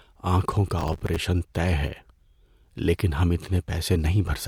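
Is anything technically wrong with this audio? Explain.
Yes, there's a burst of processor overload crackle from about 0.79 to 1.24 s, right after "آنکھوں کا" and clearing before "طے ہے". The machine couldn't finish its short audio buffers in time, each just a few milliseconds long, and missed roughly twenty deadlines over that stretch. Each miss replayed a scrap of old audio with hard edges, so the speech gets a gritty, tearing crackle over it that stops once the load passes.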